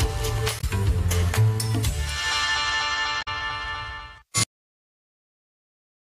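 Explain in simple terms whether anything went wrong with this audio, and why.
Damaged data in a compressed stream causes two short glitches, one from 0.56 to 0.64 s and another from 3.18 to 3.28 s. Each lasts under a tenth of a second. In both spots, part of the compressed file was wrong, with bytes missing, blanked or overwritten. The decoder that rebuilds the audio couldn't read those stretches properly, lost its place, and had to hunt for the next clean starting point, leaving a brief broken-sounding blip.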